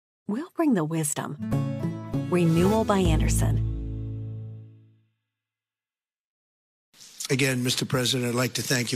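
There are no technical faults to describe.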